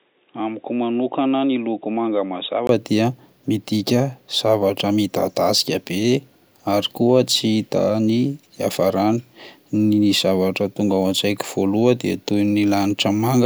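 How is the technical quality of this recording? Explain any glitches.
There's one glitch, right at the start. Until 2.69 s it's dull and boxy, cut off above 3.8 kHz and about 5 dB quieter. Then there's a 20 ms gap and it opens up at "dia midika zavatra". That's likely an input switched to a poorer device.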